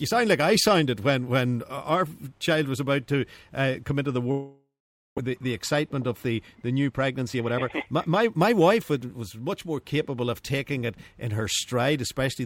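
From 4.31 to 5.19 s the sound smears into a fading buzz or hiss, then falls silent, likely a long network dropout that lost 500 ms. From 6.89 to 9.22 s the audio hurries along at 114% speed with unchanged pitch. This is a jitter buffer speed-up, which trims roughly 0.3 s of backlog.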